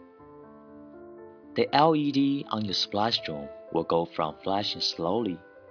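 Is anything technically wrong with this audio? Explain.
No, no technical faults.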